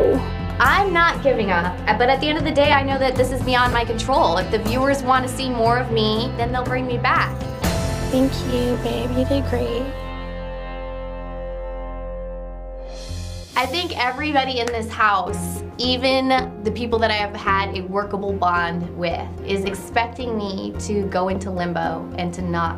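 Overlapping chunks produce brief stutters at 2.73, 8.74, 14.75 and 20.77 s, one every 6.0 s. Each chunk begins 13 ms before the previous one ends, so that sliver repeats as a click. On a waveform or spectrogram, each join shows a short duplicated segment and a vertical broadband line.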